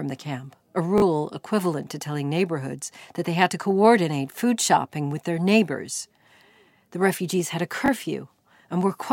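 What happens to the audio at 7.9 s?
A repeated buffer at 7.86–7.88 s, just after "refugees had a": late audio made the device replay one 20 ms block, giving a brief click, seen as a duplicated waveform segment with hard vertical edges.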